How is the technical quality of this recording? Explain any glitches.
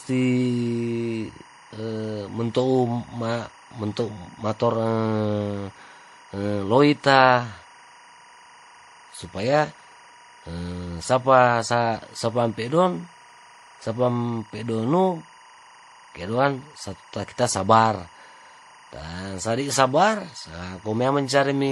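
The recording has two technical faults that persist throughout the speech.

Timecode bleed runs under the entire clip. Linear timecode from an adjacent track or cable has leaked in, and its square wave flips between tones around 1 and 2 kHz at a rate that suggests 24 frames per second. It sits roughly 25 dB below the speech as a steady chirping warble. On a spectrogram it appears as continuous horizontal bands at those two frequencies.

The speech also carries layered compression artefacts, with swirly, smeared high end and a hard ceiling at 12 kHz, above which nothing remains. The likely cause is transcoding between lossy codecs: the sound points to a low-bitrate MP3 and HE-AAC stage before a final WMA encode, each codec adding its own artefacts on top of the previous ones. A spectrogram shows a flat cut-off at 12 kHz and blotchy, speckled upper bands.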